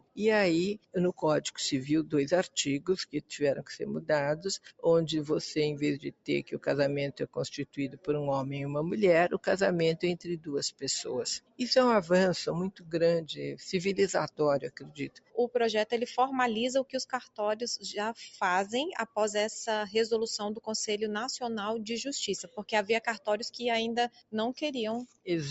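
Noise suppressor applied to music or sounds, running through the whole clip: a speech-tuned suppressor treats steady tones, ambience and decaying tails as noise, so the level swings by around 15 dB and sustained parts pump and thin while attacks pass.

Sound cut by the noise suppressor, at 0.0–3.63 s, 4.59–4.85 s, 6.05–8.08 s, 9.36–11.61 s, 12.71–13.35 s, 14.3–15.38 s, 16.84–17.39 s and 22.43–25.5 s: held or fading material is pulled down by about 20 to 21 dB at its deepest, so tails are cut short and sink abruptly.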